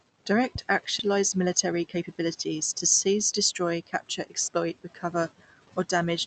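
At about 0.99 s there's a skip ahead: roughly a second of audio just isn't there, and playback jumps straight from one side to the other with no gap filled in, as if the jitter buffer dumped a backlog it had overflowed with.

Right after, from 1.09 to 4.49 s, you get a jitter buffer speed-up. The receiver snips out tiny pitch-period chunks to drain the extra delay, so the speech runs about 9% fast at unchanged pitch and sounds a bit rushed. Around a third of a second gets trimmed, all through the call codec's roughly 8 kHz bandwidth.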